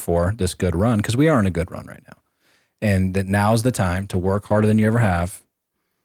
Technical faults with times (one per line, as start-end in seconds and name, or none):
3.97-6.05 call bitrate drop